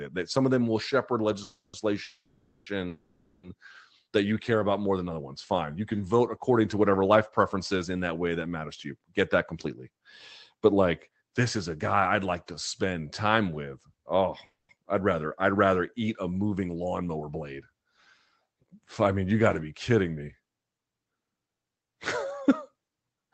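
Early on the speech hits a run of call audio freezes. At 1.43 to 1.75 s, right after "of them will shepherd" at 2.03 to 2.68 s, and again at 2.88 to 3.45 s, the talker's last sound hangs on as a fading buzz for about 0.3, 0.63 and 0.55 s. The first two tail off briefly into silence before speech resumes. The likely cause is delayed packets draining the jitter buffer. Nothing is lost: the speech simply picks up where it stopped, late. Another freeze at 14.45 to 14.71 s sits just before "I'd rather I'd", a 0.24 s fill that ends in a short silence.

Around these come jitter buffer speed-ups, where the receiver trims pitch-period slices to shed backlog. At 9.52 to 11.77 s the speech runs about 6% fast, at 16.62 to 17.43 s, just after "eat a", about 14%, and at 20.40 to 23.26 s about 12%. The pitch holds steady but the delivery sounds rushed. In total a few hundred milliseconds get squeezed out. 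All of this rides on a call codec path, whose coding noise and high-frequency roll-off around 8 kHz fit Opus at a modest bitrate.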